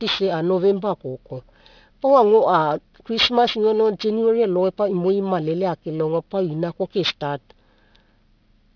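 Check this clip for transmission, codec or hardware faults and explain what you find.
One fault, present throughout the speech: aliasing. The sample rate was cut, consistent with a drop from 44.1 kHz to 11 kHz, without an anti-aliasing filter, so content above the 5.5 kHz fold point reflects downward as unrelated tones about 15 dB below the signal, leaving sibilants gritty and metallic.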